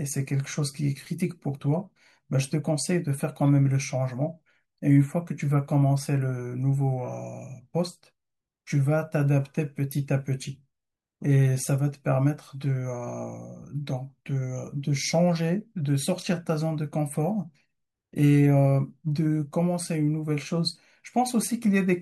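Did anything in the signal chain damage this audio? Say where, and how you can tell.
No, nothing in the signal chain damaged this audio, and I can't place harm at any stage.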